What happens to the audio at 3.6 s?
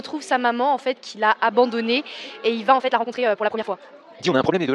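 At 3.6 s the audio is inside a time-stretched section running from 2.65 s to the end, at 4.75 s. It plays about 1.94 times faster while the pitch stays put. This is likely software squeezing the audio by dropping short pieces. The sound turns rushed.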